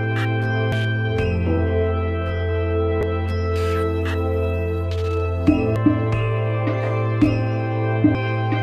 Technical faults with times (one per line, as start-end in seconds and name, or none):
0.72 damaged data in a compressed stream
2.69-3.03 damaged data in a compressed stream
5.76 damaged data in a compressed stream
8.15 damaged data in a compressed stream